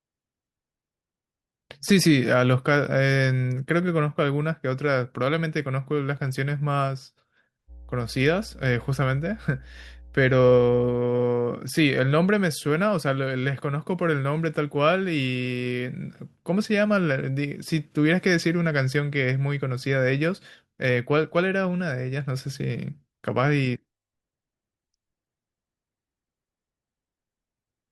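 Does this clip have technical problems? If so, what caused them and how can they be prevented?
Yes. At 6.17 s there is a tiny skip. This is an overlap between stream segments, at what sounds like a 6-second segment boundary. The player trimmed overlapping time stamps and dropped about 13 ms of real audio. Correct segment time stamps at the packager prevent this.

From 7.67 to 11.0 s a steady low 60 Hz tone sits under the speech, roughly 20 dB below it. This is mains hum. A ground loop or nearby transformer leaked the power line into the signal. Balanced cabling, a single ground point and distance from transformers prevent it.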